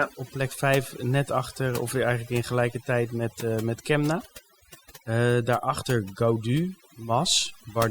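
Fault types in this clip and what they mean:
overdone noise removal: Noise reduction pushed far too hard on a noisy speech recording, running through the whole clip. Any frequency band that sits close to the estimated noise floor gets pulled down or cut entirely, taking the softer parts of the speech along with it. The gaps between phrases drop to near silence scattered with twinkling specks. On a spectrogram the background shows as isolated flickering dots on black, with harmonics ragged and fading at their edges; the waveform shows unnaturally flat, empty pauses.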